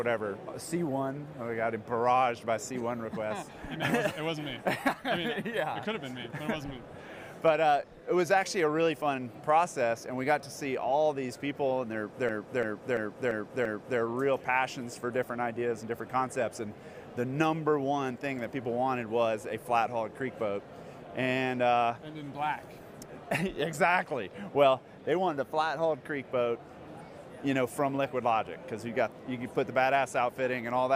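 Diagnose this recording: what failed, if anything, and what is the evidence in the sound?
A system hang loop at the driver or buffer stage. From 12.29 s to 14.0 s, one 341 ms slice repeats five times, a stutter at 2.93 Hz. The host froze while the hardware replayed its ring buffer, which fits a 16384-sample buffer.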